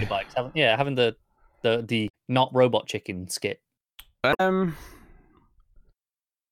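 Corrupted bytes in the compressed speech stream made the decoder lose sync, producing brief disruptions at 2.05–2.10 s (after "yeah having the the") and 4.30–4.40 s.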